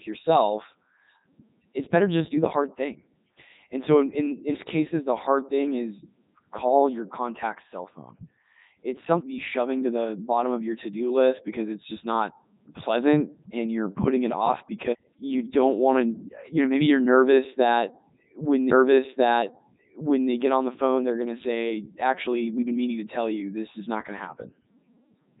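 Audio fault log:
throughout: Codec 2 vocoder. The speech is robotic and buzzy because it is rebuilt from sine waves using only pitch, voicing, energy and a spectral envelope, so the original waveform is lost. Nothing sits above 3.8 kHz, and the heavy damage fits a 3.2 kbit/s stream.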